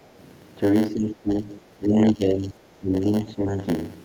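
It's a speech clip with a steady 100 Hz buzz all the way through, a block size mismatch (padded): short blocks get zero-filled, so it also runs about 8% slow. The speech then dips by up to about 15 dB from 0.93 to 1.53 s, 1.76 to 2.57 s and 2.78 to 3.62 s, likely speech suppressed in double talk by the echo canceller.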